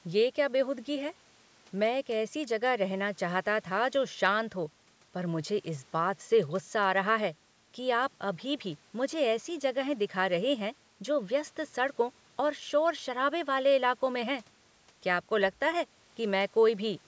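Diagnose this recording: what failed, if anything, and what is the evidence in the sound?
Nothing in this speech recording points to a failure at any stage of the chain. The audio bears the marks of a call's microphone processing, with the lowest bass trimmed by its high-pass filter and nothing present above 8 kHz, which is how that path normally behaves.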